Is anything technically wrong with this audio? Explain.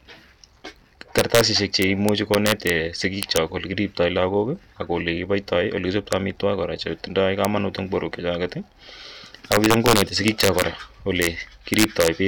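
Yes. Violent, harsh cracks burst out of the louder speech at 1.18 to 1.41 s, 1.82 to 2.70 s, 3.23 to 3.37 s, 6.13 s, 7.45 s, 9.52 to 10.62 s, 11.22 to 11.27 s and 11.74 to 12.08 s. This is integer overflow. Peaks driven up to about 4 dB past the largest integer wrap around to the opposite sign instead of being limited, so each one flips across the full range, which sounds far sharper than clipping.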